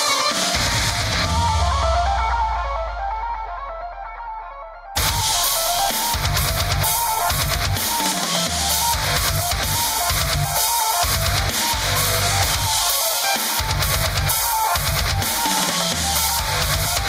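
Sounds, with gain pumping all the way through: the level swings by about 15 dB, so everything feels squashed. Likely the gain was set far too hot, with a fast limiter clamping down.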